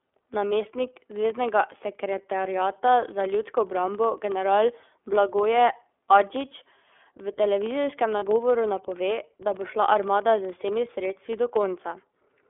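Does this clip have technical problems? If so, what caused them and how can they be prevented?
Yes, there are three problems.

Throughout the 12 s of speech, there is a filter restarted on every block. The filter drops its memory at each block boundary and starts again from silence, so every block opens with a small transient. The result is a steady buzz at about 21.5 Hz whose loudness rises and falls with the speech, which fits 2048-sample blocks at 44.1 kHz. On a waveform, small regular spikes appear at every boundary. On a spectrogram, thin vertical lines are evenly spaced across the whole clip. Prevention: carry the filter state across blocks instead of resetting it.

The whole clip also passed through the iLBC codec, and its damage is plainly audible. The line passes roughly 300 Hz to 3.5 kHz. The speech sounds rough and slightly synthetic because each frame's excitation is rebuilt from a compact model. 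The block-like coding fits the 13.33 kbps mode with 30 ms frames. On a spectrogram, nothing appears above 3.5 kHz or below 300 Hz, and the harmonics look smeared and grainy. Prevention: use a wideband codec such as Opus at an adequate bitrate.

Lost iLBC frames occur from 8.19 to 8.24 s, which points to a single missing 30 ms frame. The decoder filled the gap by repeating the last pitch cycle mixed with noise, so there is a brief held, buzzy vowel. The speech is intact again immediately afterwards. On a waveform, this shows as a short run of near-identical repeating cycles. On a spectrogram, the harmonics go flat and slightly fuzzy. Prevention: add forward error correction or redundancy and a larger jitter buffer.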